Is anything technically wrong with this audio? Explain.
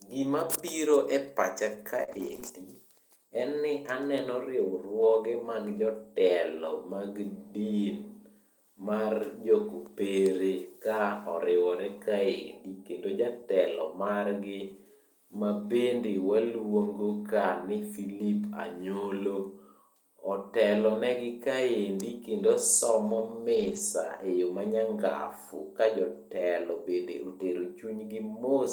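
Yes. This speech clip has two kinds of packet-loss damage, clustered just after "biro e pacha ka" and again later.

Short concealed packet loss occurs at 2.03 to 2.10 s (about 40 ms missing) and 2.40 to 2.44 s (about 20 ms). The receiver extended the preceding sound to cover each hole and then blended back, leaving a brief smear or wobble. Unlike the rebuilt sections, nothing there is real signal.

A lost packet rebuilt from error correction shows up at 2.08 to 2.38 s (160 ms), 2.44 to 2.50 s (40 ms), and 23.56 to 23.78 s (120 ms). Later packets carried low-bitrate copies, so the sound continues without a gap but turns rougher and noisier. The run lengths suggest roughly eight, two and six frames.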